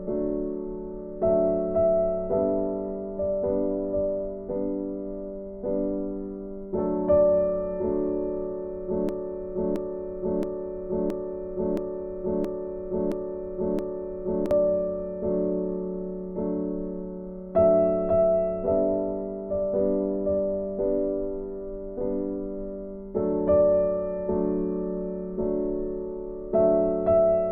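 From 9.09 to 14.51 s a broken-record loop repeats one identical 0.67 s fragment eight times, likely a stalled stream resending it; unlike a stutter, the audio never resumes where it paused.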